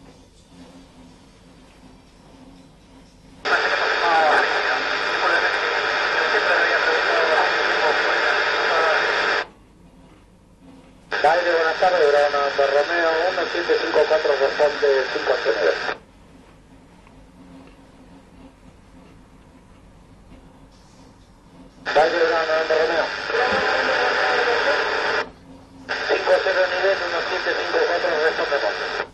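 At 23.33 s, compressed frames are skipped: about 70 ms of audio is missing, consistent with three dropped 23 ms frames, so the sound jumps ahead abruptly at the join.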